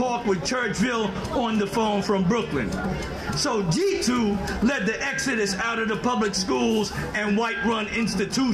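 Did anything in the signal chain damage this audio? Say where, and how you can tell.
No, nothing in the signal chain damaged this audio.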